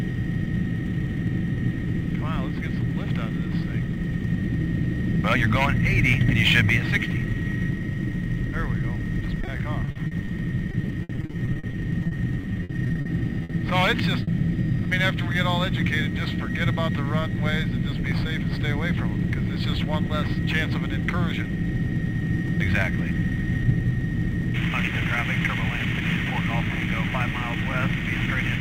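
From 9.41 to 10.29 s, and again from 10.71 to 13.07 s, the sound turns choppy, with a robotic, stuttering texture and small pieces dropping out. This is repeated packet loss, giving a robotic sound. Packets kept failing to arrive in time, and each hole was patched by extending the last sound before the next gap arrived. In the first stretch about 180 ms is filled in, roughly a fifth of the span, with gaps up to 40 ms. The second stretch is denser, with about 540 ms concealed and gaps up to 60 ms.

At 13.43 to 13.51 s a held, fading smear replaces the real audio for about 60 ms, and the sound then picks up slightly further on with that stretch gone. This is a burst of packet loss. Several consecutive packets missed their playout time, so the receiver stretched the last sound and lowered it as the gap went on. The gap is short for a burst.

At 14.23 to 14.29 s there is a brief wobble lasting about 40 ms where the audio smears before settling back. 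This is a short concealed packet loss. A few hundredths of a second never reached the decoder in time. The receiver synthesised a continuation of the preceding sound and then blended it back into the real signal. The result is a quick blur rather than an obvious gap.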